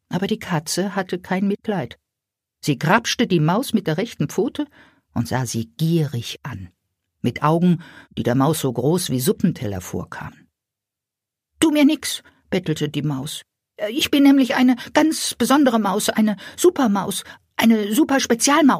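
No technical faults can be heard anywhere in the recording, and the signal holds steady throughout.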